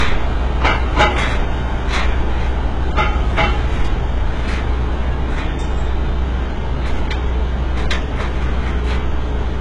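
Across the whole recording of sounds, nothing is present above 11.4 kHz, and the artefacts of heavy data reduction stay audible. The file itself is MP3 at a rate that fits 256 kbit/s, yet it sounds no better than its origin. This is low-bitrate audio saved at a high bitrate, most likely a 12 kbit/s HE-AAC encode re-encoded later. The second pass adds almost nothing and cannot restore what the first removed.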